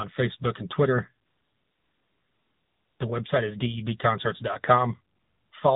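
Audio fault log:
Throughout: AMR narrowband mobile codec. Nothing above 4 kHz survives, and the sound has a plainly audible buzzy, synthetic edge, which fits a low AMR-NB mode near 7.4 kbps, where a few pulses per subframe drive a vocal-tract model.
1.26–3.00 s and 5.16–5.52 s: AMR comfort noise. Speech frames stop for 1.74 s and then for 0.36 s, and the receiver fills each pause with steady, smooth synthetic noise built from a coarse level-and-spectrum description, so the real background switches out abruptly.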